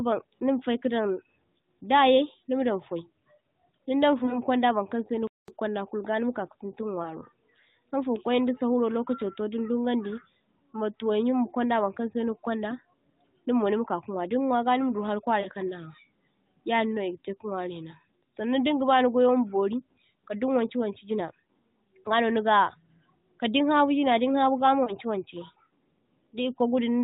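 Lost AMR speech frames first appear from 4.24 to 4.39 s, then 7.03 to 7.14, 15.40 to 15.48 and 24.84 to 24.97 s. At each, the narrowband mobile speech briefly warbles and dips as the decoder repeats its last good pitch and vocal-tract settings at falling gain, which fits one or two missing 20 ms frames. Unlike a dropout, the gap is filled with smeared sound rather than silence.

From 5.27 to 5.48 s, a playback stall cuts the sound dead for about 0.21 s, likely because the player ran short of data, and then resumes. It is true silence with no fading concealment, and it lasts far longer than a frame loss.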